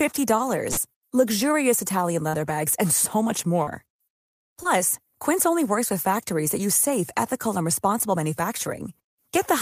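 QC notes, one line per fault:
0.71–0.79 s, burst of packet loss: about 60 ms of audio never arrived, so the receiver extended and faded the preceding sound for roughly 54 ms before resuming further on with that stretch missing.
2.29–2.35 s, 3.63–3.69 s, 4.63–4.67 s, short concealed packet loss: gaps of 45, 36 and 20 ms, with 40, 40 and 20 ms of audio missing, were each bridged by continuing the last sound, then blending back, heard as brief smears or wobbles.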